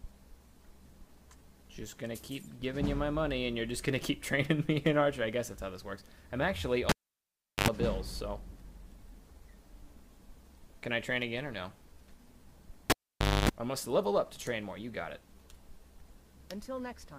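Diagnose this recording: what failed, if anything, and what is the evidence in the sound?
Cable pulled and plugged in at 6.89 s and 12.90 s, analogue wiring: pops frame 0.74 s and 0.54 s dropouts, then 50 Hz buzz as only the tip touches.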